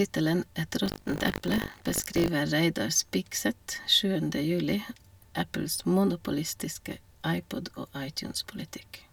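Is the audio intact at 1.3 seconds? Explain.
No. From 0.84 to 2.28 s, buffer tearing: writer and hardware reader cross each period, splicing in roughly a tenth of audio from about 70 ms earlier, giving a robotic 50 Hz buzz over the speech.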